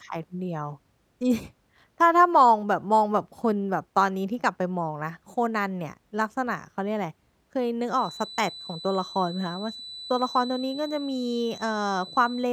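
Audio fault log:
7.86–12.53 s, feedback whistle: a thin 4 kHz tone, slowly swelling and fading, sits well below the speech to the end, likely a speaker-to-microphone loop held just short of runaway.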